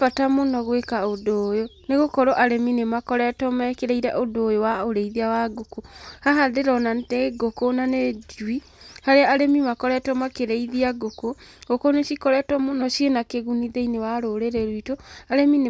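Speech recording, no audible technical faults anywhere in the clip.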